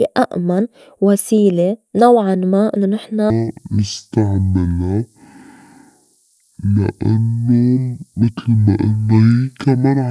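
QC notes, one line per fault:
3.30 to 10.1 s, wrong sample rate: from here to the end the speech drops a full octave, about 12 semitones lower, and drags at half speed, so each syllable stretches out low and sluggish. Speed and pitch fall together by the same factor of 0.5 because the samples are being played back at half the rate they were captured at, with no conversion. That fits 44.1 kHz material being played at roughly 22 kHz.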